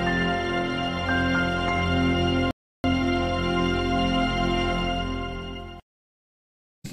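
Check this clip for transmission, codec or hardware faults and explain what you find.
One transmission fault is present. Rebuffering stall, 2.51 to 2.84 s: the player exhausted its downloaded audio and halted until more data arrived, so the sound drops to silence for about 0.33 s, then picks up exactly where it stopped, adding time without losing any material.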